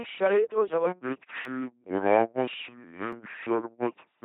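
From start to finish, the speech passes through an LPC-10 vocoder. The sound points to its 2.4 kbit/s mode. Each instant is rebuilt from a small all-pole filter fed by either a pulse train or noise. Nothing in between is allowed. The result is a heavy, buzzing robot voice. Hiss and buzz swap in where voiced and unvoiced frames are misjudged. Nothing is present above 3.8 kHz. The damage is heavy throughout.

At 0.87 s, a section at the wrong speed begins and runs to the end. Playback drops to 0.627 times the original rate. Pitch and tempo fall together. The voice sinks by roughly seven semitones and drags noticeably. The likely cause is a playback clock mismatched to the recording. The change is sudden, not gradual.

At 1.45 s, there is a repeated buffer. A tiny slice of audio plays twice, with a hard join. Its length, about 5.3 ms, fits a 256-sample buffer. No audio is skipped. The repeat is too short to sound like a stutter. 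It lands as a brief click or buzz.

At 3.13 s, the same fault returns. Again one 5.3 ms block plays a second time. Again it is heard as a short click or buzz in the slowed, vocoded speech.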